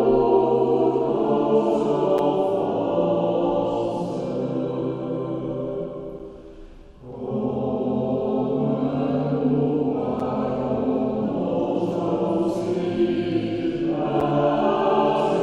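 Gap between chunks at 2.18, 6.19, 10.2 and 14.2 s: each time the sound drops out for about 7 ms. The holes fall every 4 s, which points to the audio being handled in 4-second chunks with a sliver of silence inserted at each join, from padding or from playback of the next chunk starting late. Nothing is lost, but the flow is clipped off briefly at every boundary, heard as a regular tiny dropout.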